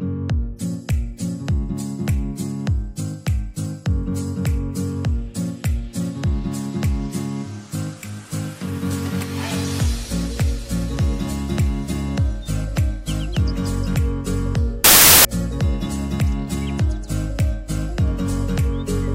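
From 14.84 to 15.25 s the audio bursts into loud noise with the original faintly audible underneath, running about 1.33 times too fast and raised in pitch. This is a wrong sample width fault, and it fits packed 24-bit data being read as 32-bit integers. Each read then takes four bytes from three-byte samples, so most values straddle sample boundaries and playback speeds up by four-thirds.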